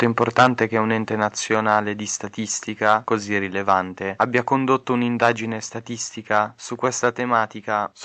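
Speech, carried over a call path whose content stops near 8 kHz, consistent with a wideband Opus stream. Microphone overload, likely from input gain set too high, flattens the peaks at 0.03–0.47 s (about 12 dB over, just before "che un ente"), 1.22–1.77 s (right after it), 2.85–2.95 s, 3.69–4.38 s, 5.22–5.29 s and 7.04–7.07 s. The waveform shows squared-off tops, and the spectrogram shows crackly vertical smears of harmonics on the loud syllables. The microphone volume was also stepped down by about 2 dB at 0.43 s and 7.11 s, likely the call software's automatic gain reacting to the clipping. Each step appears as a sudden drop in waveform envelope and a slight overall darkening of the spectrogram that carries through both voice and background.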